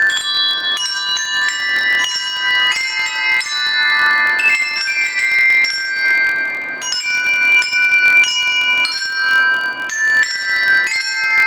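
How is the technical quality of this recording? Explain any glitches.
The recording carries one fault throughout: a filter restarted on every block. It resets to silence each block, adding a small transient. The result is a 43.1 Hz buzz, which fits a 1024-sample block, tracking the sound's level.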